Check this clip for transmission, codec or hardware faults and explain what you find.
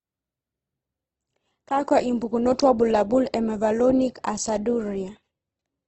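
One fault is audible in this speech. Adaptive stream at a lower bitrate, from 1.16 s to the end: the connection slowed, so playback switched abruptly, without a gap, to a leaner encoding. The treble stops at 8.4 kHz, artefacts rise, and the sound fits a drop from roughly 64 to 12 kbit/s Opus.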